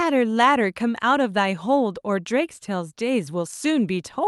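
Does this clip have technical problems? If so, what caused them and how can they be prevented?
No, nothing here needs fixing: this speech came over a normal call connection, and the top end tapering off around 12 kHz is just what that kind of call coding does, which fits Opus running at a fairly generous bitrate.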